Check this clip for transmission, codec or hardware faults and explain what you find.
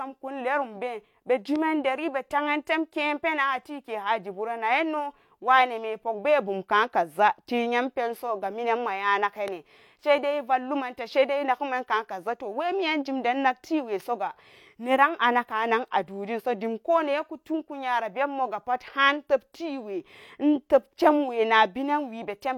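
Two loud pops break into the speech, from 1.56 to 1.58 s and from 9.48 to 9.50 s. The likely cause is a brief voltage spike entering the signal chain, such as a plug or switch transient, a static discharge or a driver glitch, which the downstream circuitry then shapes into a short pulse. Each one is heard as a single sharp pop, roughly 10 dB above the speech, lasting about 20 ms, while the speech continues underneath without a break.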